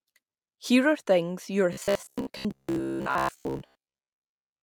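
From 1.73 s to 4.62 s, just after "are things your", the speech turns into robotic sound from repeated short buffers. The likely cause is new audio arriving too rarely, so playback kept looping a fragment of about 15 ms while real audio was skipped, for most of that stretch. Each loop stamps a fixed buzz at about 66.7 Hz onto the speech, which becomes a rigid, metallic drone that only loosely tracks the syllables.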